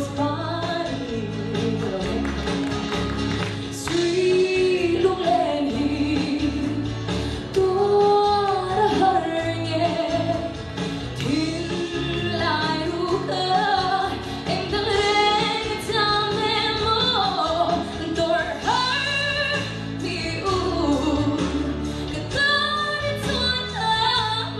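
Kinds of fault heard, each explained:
No faults detected; nothing in the signal path calls for comment.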